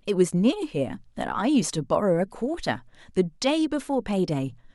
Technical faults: none

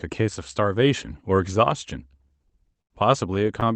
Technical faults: repeated stalls (stutter)

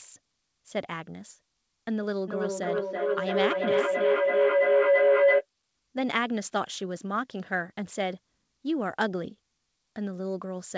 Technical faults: feedback howl

